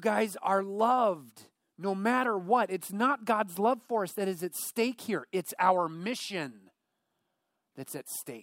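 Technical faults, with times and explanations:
Nothing to flag here, as the speech carries on without any technical trouble I can pick out.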